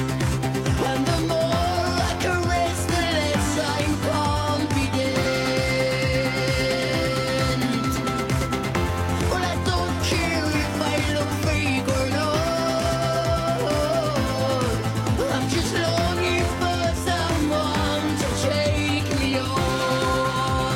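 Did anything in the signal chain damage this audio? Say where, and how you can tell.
Yes: 50 ms disruptions at 0.79, 5.21, 10.50 and 16.03 s point to damaged data in a compressed stream. The decoder misread the corrupted frames and lost sync.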